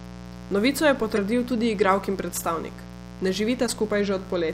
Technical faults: mains buzz; corrupt frame decoded

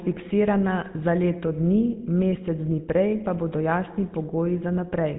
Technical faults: GSM full-rate codec

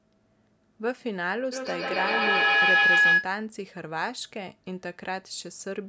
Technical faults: feedback howl

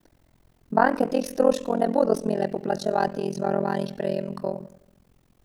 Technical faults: overlap-add ripple

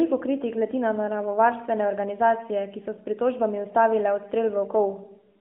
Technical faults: none

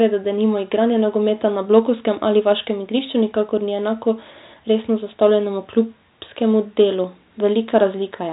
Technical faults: none

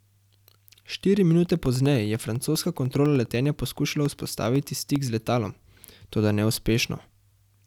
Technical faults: periodic USB or driver dropouts

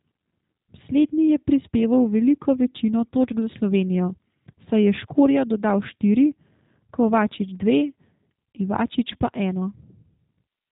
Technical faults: G.729 codec

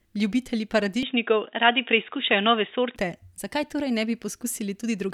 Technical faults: input switched to a poorer device

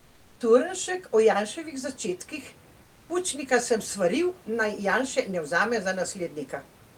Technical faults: comfort noise in place of the background

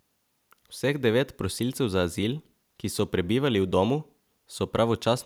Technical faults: none

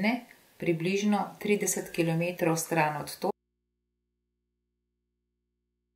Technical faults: audio dropout to a faint residue

